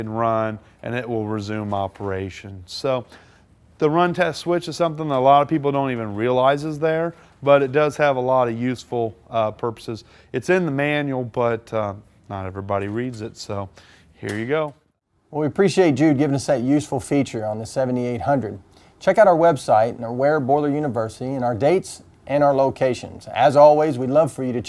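No technical faults can be heard anywhere in the clip.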